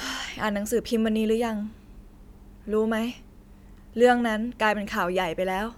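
No technical faults are audible.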